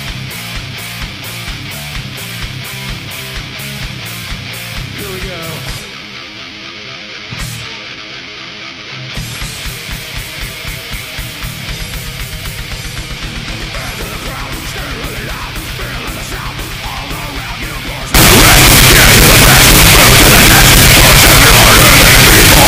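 From 18.14 s to the end, the sound jumps to a loud, harsh, near-square level with the background noise as loud as everything else, likely float read as integer.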